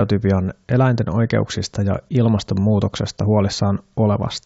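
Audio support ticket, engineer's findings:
No audible defect found in the speech recording; signal path behaving as expected, no action required.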